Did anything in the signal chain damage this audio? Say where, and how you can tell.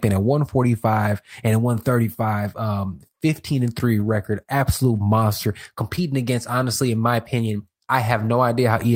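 Yes. The network stage damaged it. Brief rough, noisier patches appear at 3.99 s, 4.95 s, 5.97 to 5.99 s, and 8.17 to 8.27 s just after "honestly in my opinion". This is lost packet rebuilt from error correction: the decoder played low-bitrate backup copies, 20 ms each and 60 ms for the last.

A short smear or wobble at 5.95 to 5.99 s, right before "against honestly in my", is short concealed packet loss. About 20 ms never arrived in time, and the receiver extended the preceding sound to cover 17 ms before blending back into the real audio.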